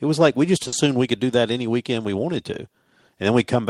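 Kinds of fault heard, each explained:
Short stall from a late packet: Just after "was like we just", around 0.63 to 0.66 s, a packet arrives late and the receiver holds the last sound for about 20 ms, losing nothing. On a spectrogram the harmonics run flat and unchanging; the waveform repeats one cycle.
Burst of packet loss: From 0.67 to 0.73 s, about 50 ms of audio never arrives. The receiver fills it with a fading continuation of the last sound, then jumps ahead to "we could do that". The spectrogram shows a smeared, dimming band, then a hard restart.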